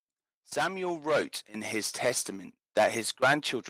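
Speech recording with automatic gain rising from 0.56 to 2.33 s: the AGC lifts level by about 6 dB, swelling voice and background together.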